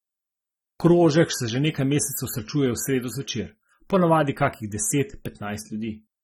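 Dull, smeared speech with a fizzy, warbling edge on sibilants and held sounds runs through the whole clip, and nothing survives above about 17.8 kHz. The likely cause is AAC compression at a low rate, with the damage consistent with AAC-LC near 24 kbps: the encoder starves its frequency lines of bits, leaves gaps in the spectrum or fills them with substitute noise, and trims the top end, producing that clouded, swirling texture.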